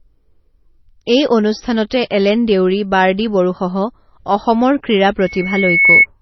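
Throughout, the speech is band-limited with nothing above 5.9 kHz, and two kinds of coding artefact overlap, likely from transcoding between lossy codecs, consistent with low-rate MP3 re-encoded to HE-AAC. From 5.19 to 6.06 s a loudspeaker feedback squeal appears: a 2.2 kHz tone swells over less than a second to about 10 dB above the speech.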